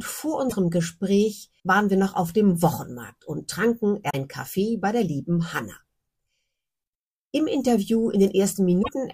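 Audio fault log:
0.46–0.53 s, 4.06–4.15 s, 8.79–8.89 s: damaged data in a compressed stream. Corrupted frames make the decoder lose sync and hunt for the next header, producing brief glitches.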